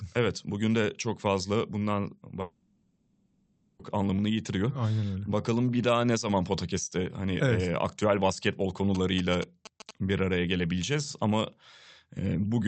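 From 2.41 to 3.81 s, the sound dissolves into a fading buzz and hiss, then resumes with a stretch missing. This is likely a long network dropout, concealed throughout. From 8.95 to 9.91 s, a galloping tick pattern with short 217 Hz buzzes sits about 10 dB below the speech. These are GSM signalling bursts from a nearby phone.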